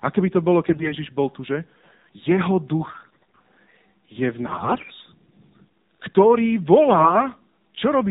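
Speech is carried throughout by the AMR narrowband mobile codec, sampled at 8 kHz with nothing above 4 kHz. The voice is rebuilt from a vocal-tract model fed by sparse pulses, and the plainly buzzy, synthetic edge points to a low mode around 7.4 kbps.

AMR bit errors strike from 0.66 to 0.93 s, 2.88 to 3.41 s, 4.48 to 4.92 s and 6.88 to 7.26 s. Flipped bits in weakly protected parts of the frames misplace excitation pulses and skew fine gain and spectral values. The voice roughly keeps its pitch and loudness but turns hoarse, scratchy and gargly.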